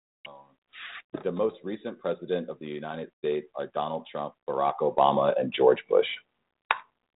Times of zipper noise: 0.95-1.32

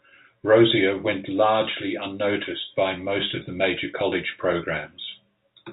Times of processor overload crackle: none

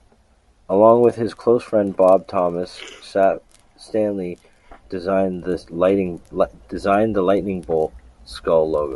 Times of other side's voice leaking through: none

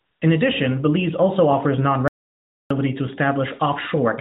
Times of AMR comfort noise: 0.00-0.22

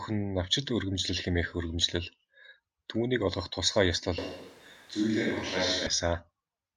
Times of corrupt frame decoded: 6.07

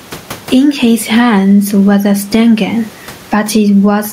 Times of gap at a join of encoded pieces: none

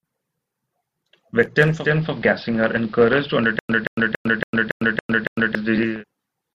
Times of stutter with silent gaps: 3.59-5.55

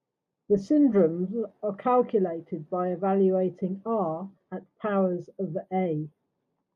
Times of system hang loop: none

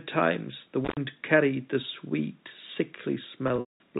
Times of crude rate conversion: none

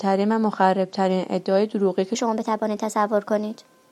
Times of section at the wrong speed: 2.15-3.92

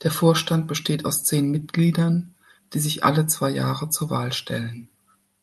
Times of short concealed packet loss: 1.59-1.63

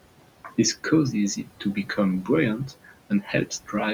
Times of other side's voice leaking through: none

